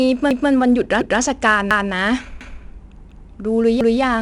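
4-bit ADPCM compression runs through the whole speech clip. Each sample is coded as a coarse 4-bit step away from a predicted value, so a gritty hiss rides on every loud passage and rises and falls with the level. Consonant attacks smear where the step size lags behind. The damage is plainly audible. Nothing is present above 10.6 kHz, and the data rate of roughly 89 kbps fits a sample rate near 22 kHz.

Overlapping chunks appear at 0.31, 1.01, 1.71, 2.41, 3.11 and 3.81 s, each lasting 0.2 s. The audio was handled in 0.5 s chunks, and each new chunk began 200 ms before the previous one finished, so that stretch plays twice at every join. The result is a regular stutter, with a jump back every 0.7 s.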